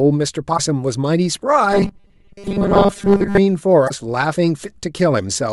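A short glitch, heard as a chirp, squawk, click or brief hole, breaks in from 0.54 to 0.59 s. This is damaged data in a compressed stream: some bytes in that part of the file were lost or corrupted, so the decoder misread those frames, lost its place, and had to hunt for the next valid frame header before normal decoding resumed.

From 1.72 to 3.38 s the voice turns into a hard, metallic buzz fixed at 200 Hz, still tracing the rough shape of the words. This is robotic sound from repeated short buffers. The likely cause is audio arriving too slowly, so the player keeps re-sending a 5 ms slice in place of most of the real material. That slice repeating 200 times a second imposes the steady tone.

A second glitch, another case of damaged data in a compressed stream, appears from 3.85 to 3.91 s. Corrupted frames there again forced the decoder to resynchronise.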